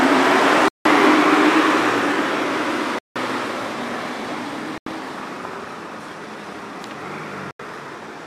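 Short holes break the sound at 0.68–0.85 s and 2.99–3.16 s (170 ms each), then at 4.78–4.86 s and 7.51–7.60 s (85 ms each). These are blocks of digital silence. Their lengths fit whole buffers of 8192 and 4096 samples being zeroed, which points to output that wasn't filled in time.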